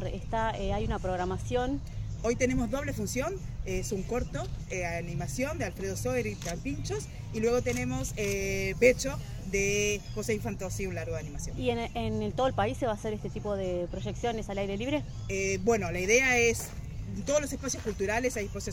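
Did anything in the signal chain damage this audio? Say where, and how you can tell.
No, nothing along the signal chain can be heard to have damaged this audio, and its level, continuity and timing hold steady throughout.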